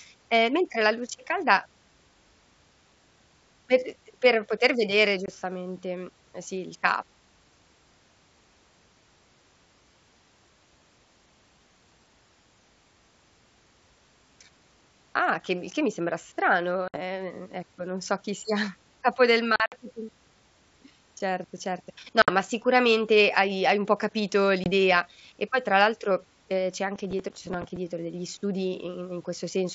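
Packet loss on an ADPCM call cuts hard-edged silent holes into the speech five times: at 5.26 to 5.30 s, 20 ms, right after "per poter vedere"; at 16.88 to 16.98 s, 60 ms, between "che mi sembra strano" and "ecco non so chi"; at 19.56 to 19.74 s, where 100 ms goes missing in pieces spread over 160 ms after "capo del", the longest run 60 ms; at 22.22 to 22.31 s, 60 ms; and at 24.64 to 24.70 s, 20 ms. The gap lengths fit one to about five lost 20 ms packets. Because the receiving decoder's predictor and step size lose track of the sender's during each hole, the speech comes back with some distortion that clears within a few tens of milliseconds. That recovery smear after a true silence is the mark of this fault. Through the clean stretches the G.722 wideband coding at 64 kbit/s leaves at most faint damage.

From 26.95 to 27.77 s, processor overload crackle takes over. Here the processing missed its deadline for roughly fifteen short buffers, each around 5 ms, and each missed slot was filled by replaying old audio. 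The result is a gritty tearing laid over the speech rather than a silent hole. It has no misadjusted level on recovery, and it stops as soon as the load eases.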